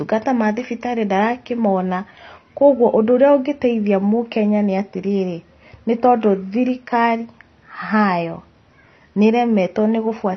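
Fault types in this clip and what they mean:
AAC compression: likely a low-rate AAC-LC encode, around 24 kbps, discarded high bands, so the speech is dull and smeared, with nothing above 6.2 kHz.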